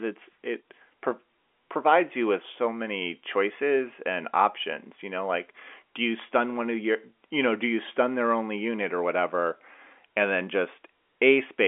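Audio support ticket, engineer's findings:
No faults found.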